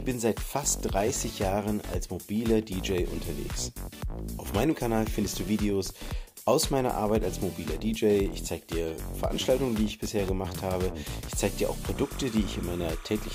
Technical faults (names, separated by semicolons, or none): timecode bleed